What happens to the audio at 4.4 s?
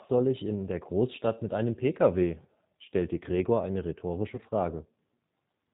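At 4.35 to 4.40 s there is VoIP packet loss concealed by the speech codec. About 30 ms of audio went missing, which fits a single lost packet. The decoder filled the gap by extending its last pitch and vocal tract filter at falling gain, so the sound smears into a brief buzzy tone or coloured noise that fades, and the speech stays weak or distorted just after it. On a spectrogram, the content runs flat through the gap and dims. The waveform shows the fill shrinking in amplitude.

The G.729 codec also shapes this moment, as it does the whole clip. The speech is rebuilt from a filter, a pitch predictor and a few pulses per frame, giving a plainly audible rough, synthetic texture that points to G.729A at 8 kbit/s. A spectrogram shows nothing above 4 kHz.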